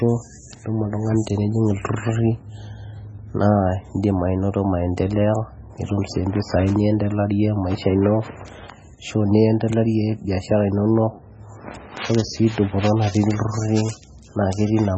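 From start to finish the speech stops dead at 8.4 kHz and sounds watery and swirly, with metallic s sounds and smeared attacks. That's likely heavy MP3 compression, fitting a bitrate around 16 kbps, with weak frequency lines flickering between frames.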